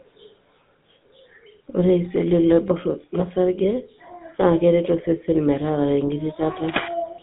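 Throughout, the speech has gone through a GSM full-rate codec, consistent with a 13 kbps link. Nothing above 3.8 kHz survives, and the voice has a buzzy, gravelly roughness.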